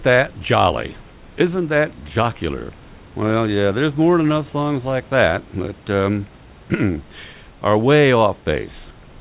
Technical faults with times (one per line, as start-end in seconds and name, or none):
none